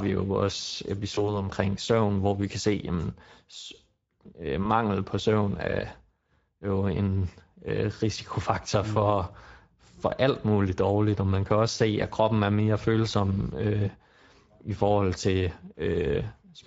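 Speex codec damage runs throughout, a hoarse, noisy CELP coarseness in the speech that fits roughly 16.8 kbps. VoIP packet loss concealed by the speech codec occurs at 1.15–1.45 s, between "jo vores" and "søvn hvor vi kan", and at 4.63–4.66 s before "på søvn er". Each gap sounds like about one 20 ms frame, bridged by a fading extrapolation of the voice that leaves it weak or distorted afterward.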